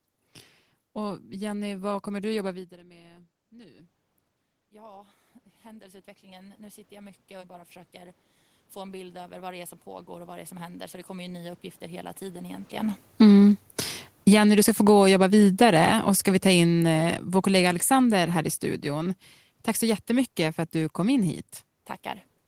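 Just after "vad kommer du jobba", at about 2.5 s, the talker moves away and the input drops by about 20 dB. Automatic gain rising follows from 2.48 to 3.99 s, adding about 4 dB. It continues from 4.7 to 12.73 s, adding about 18 dB, as the gain control slowly compensates. Voice and room noise swell together throughout.

Around 12.5 s the talker comes closer, and the raised gain is now too high. Automatic gain falling pulls it down by about 4 dB from 13.06 to 13.37 s, then by about 12 dB from 14.12 to 19.14 s. The sound starts loud and sinks together with its background.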